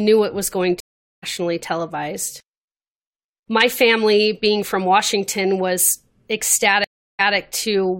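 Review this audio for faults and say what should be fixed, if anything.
Two stream reconnect events are audible in this speech. Just after "knew it was going", the audio goes silent from 0.80 to 1.24 s (about 0.42 s of silence) and resumes roughly 0.4 s further on, so material is skipped. From 6.84 to 7.35 s there is 0.345 s of silence, after which playback resumes 0.163 s earlier, repeating material. Each time the connection dropped and a fresh decoder restarted mid-stream. Unlike a plain dropout, which picks up where it stopped, these jump to a different point. Buffer and resynchronise on stream position, so that a reconnect resumes at the exact point where playback broke off.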